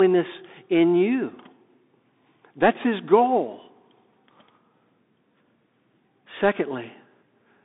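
From start to finish the speech passes through a Bluetooth CVSD headset codec. The band runs from about 200 Hz to 3.7 kHz, with nothing above 3.8 kHz. Its one-bit slope coding, which fits a 64 kbps link, leaves granular hiss, scratchy s sounds and overload distortion on loud high sounds, unlike cleaner narrowband telephone filtering.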